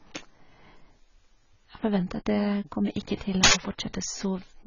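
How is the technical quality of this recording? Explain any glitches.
Technical quality is poor: the speech is heavily band-limited and smeared throughout, and a burst of digital noise interrupts it near the end.

Across the whole clip, nothing is present above about 7.1 kHz, and the speech sounds dull, with a warbling, fizzy texture on sibilants and sustained sounds. The likely cause is heavy AAC compression at a very low bitrate, around 16 kbps. The encoder quantises each frame's spectrum coarsely, dropping high bands and blurring detail. On a spectrogram this shows as a flat ceiling near 7.1 kHz with patchy, hole-ridden bands below it.

From 3.44 to 3.53 s, an uninitialised buffer plays a loud, harsh blast of digital noise lasting about 93 ms, which fits a 4,096-sample block. Playback reached that block before any audio had been written into it, so leftover memory contents came out as samples. 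In the waveform this appears as a dense slab of noise. On a spectrogram it is a bright vertical band of broadband energy, sharply cut off at both edges.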